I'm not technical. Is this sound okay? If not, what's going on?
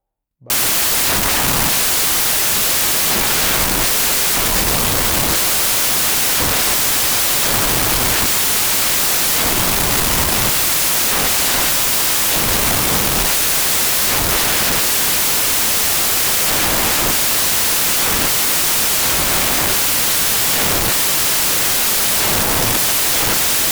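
No. From 0.5 s to the end, the samples are built from the wrong bytes: each value is misassembled, so the speech becomes loud hiss.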